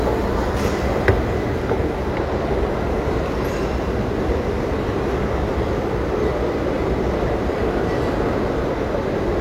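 Throughout, computer activity noise rides under the sound. A buzzing chirp pulses around 200 Hz, roughly 25 dB down. Computer load shifts the shared ground into the audio.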